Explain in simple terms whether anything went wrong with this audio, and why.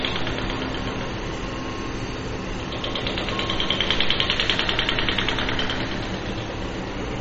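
Mains hum runs through the whole clip, from start to finish: a steady low buzz at 60 Hz sitting clearly beneath the sound. It comes from the electricity supply leaking into the recording, usually through a ground loop or a nearby transformer, so the tone never changes.

MP3 compression damage is also plainly audible across the entire clip, with everything above about 8.2 kHz missing, which dulls the sound. This is likely caused by saving at a very low quality: the encoder discards the top end and drops quieter detail, leaving a watery, swirling texture and softened attacks.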